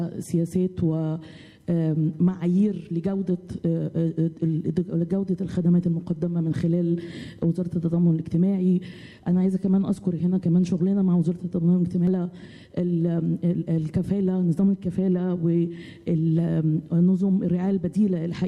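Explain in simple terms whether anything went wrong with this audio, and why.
At 12.07 s there is a brief glitch, heard as a chirp, squawk, click or short gap: a case of damaged data in a compressed stream. The audio was stored in a compressed format, and a small stretch of that stored data was corrupted. When the player reached it, it could not decode that piece correctly, lost its place in the stream and had to find the start of the next readable chunk. That momentary misreading produces the short glitch.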